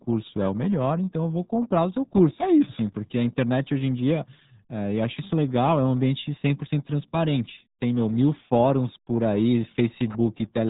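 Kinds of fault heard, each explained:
RealAudio 14.4 codec: The speech sounds muffled and gargly from start to finish, with a thick, bubbling quality and nothing audible above 3.8 kHz, so sibilants and consonant edges are dulled. This is heavy damage from RealAudio 1, an early dial-up-era speech codec that models the voice crudely and throws away the upper band, and the degree of loss fits a bitrate of about 8 kbit/s.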